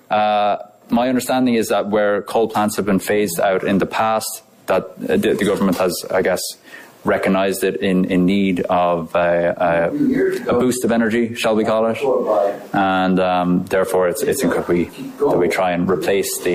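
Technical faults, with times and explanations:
14.54 to 14.59 s, damaged data in a compressed stream: there's a short glitch here, roughly 50 ms. A stretch of the compressed data got corrupted, so the decoder chewed on bad frames for a moment, lost its footing, then hunted for the next valid frame header and picked up from there. That garbled decode is what you hear.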